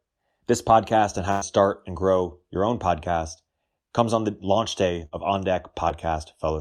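Right after "podcast on how", from 1.31 to 1.43 s, there's a burst of packet loss. Roughly 100 ms never arrived, so the receiver continued the last sound and faded it down before picking up at "start and grow your", skipping that stretch. A smaller one follows "on the launch day" at 5.05 to 5.13 s, with about 60 ms gone.

Then at 5.89 to 5.92 s there's a short concealed packet loss. About 20 ms went missing and got patched by extending the preceding sound, so you hear a quick smear or wobble rather than a gap.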